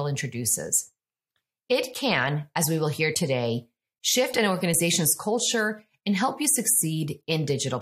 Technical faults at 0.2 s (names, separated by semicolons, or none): none